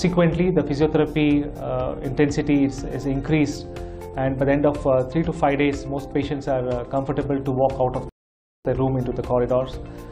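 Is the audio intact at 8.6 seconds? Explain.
No. At 8.6 seconds the sound has dropped to silence, part of a rebuffering stall from 8.09 to 8.65 s. The player ran out of downloaded audio and paused until more arrived, then resumed exactly where it stopped, adding 0.56 s of time without losing any sound.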